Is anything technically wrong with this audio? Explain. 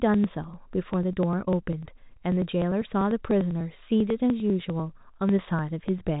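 Yes. The speech carries periodic USB or driver dropouts from 0.14 s to 6.08 s. Every 0.099 s, roughly a millisecond of audio goes missing, around seventy times in all. The gaps are skipped, not filled with silence. Something is stalling the USB link or audio driver on a fixed cycle. The result is a steady, regular ticking, about ten per second, riding on the telephone-band sound, which stops near 3.8 kHz.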